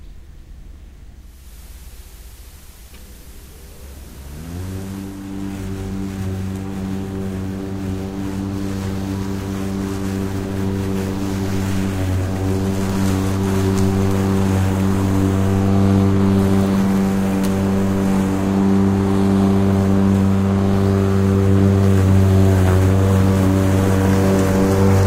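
From 1.13 to 5.44 s, digital radio blends to FM analogue over 464 ms. Hiss about 30 dB below the signal appears, and level drops about 2 dB.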